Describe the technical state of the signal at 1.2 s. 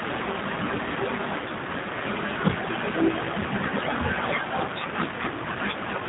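At 1.2 s the speech carries G.729 codec damage, present across the whole clip rather than just this moment. The codec resynthesises speech from a vocal tract filter, a pitch predictor and a sparse set of pulses per frame, so the sound is clearly rough and slightly synthetic, with nothing above 4 kHz, which fits an 8 kbit/s G.729A stream. A simple low-pass filter would only dull the sound. Here it has a buzzy, rebuilt texture.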